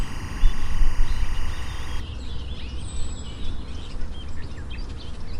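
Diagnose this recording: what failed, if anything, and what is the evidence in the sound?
Timecode bleed, in the analogue wiring. From 0.0 to 2.0 s a chirping warble sits about 20 dB below the sound. It flips between roughly 1 and 2 kHz. Linear timecode on a neighbouring cable is leaking in. Its rhythm fits 23.976 frames per second.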